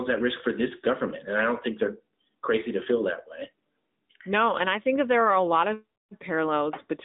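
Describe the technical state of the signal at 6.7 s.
At 6.7 s you're hearing the AMR narrowband mobile codec, same as across the whole clip. The speech is squeezed into a phone band of roughly 200 Hz to 3.7 kHz with nothing past 3.8 kHz, and the pulse-driven vocal-tract model leaves a plainly buzzy, synthetic edge, which fits a bitrate around 10.2 kbps.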